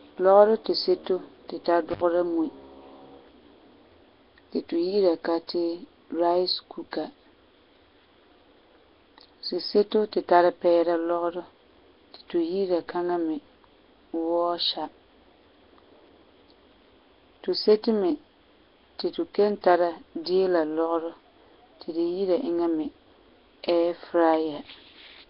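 The whole speech clip has a rough, hissy halo and a smeared, underwater feel, with nothing above about 5.3 kHz. That heavy damage likely comes from Nellymoser compression, the old Flash microphone codec, which leaves weak bands empty and fills them with noise, at what sounds like about 22 kbps.

Just after "tu tara", from 1.91 to 2.01 s, there's an intermittent contact: a loose plug or cable opens for about 73 ms, so the speech drops out, with crackle at the edges where the connection breaks and comes back.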